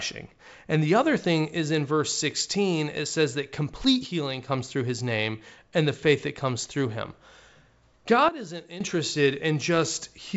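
At 4.07 s, right after "it says that complete", the speech drops by about 6 dB in a single step, and the level returns abruptly at 4.48 s before "through his name and". A second, deeper sudden gain jump of about 12 dB runs from 8.29 to 8.81 s. Speech and background noise fall together with no fade, which likely points to a digital gain setting applied without a ramp. The waveform envelope shows sharp rectangular steps, and the spectrogram shows a uniform darkening across the whole band, which extends up to about 7.7 kHz.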